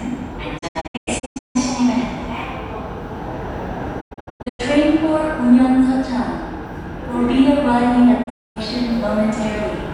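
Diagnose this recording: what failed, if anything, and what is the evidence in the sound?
The receiver's digital reception failed three times: frames went missing or failed their checks, and the decoder muted until clean frames returned. This digital broadcast dropout cuts the sound with a quick fade of about 20 ms into scattered holes. From 0.57 to 1.57 s the gaps total about 576 ms, the longest 160 ms. From 4.00 to 4.61 s they total 416 ms. At 8.22 to 8.58 s they total 288 ms, mostly one 256 ms hole. The gap sizes fit frames of roughly 32 ms, and the missing audio is gone.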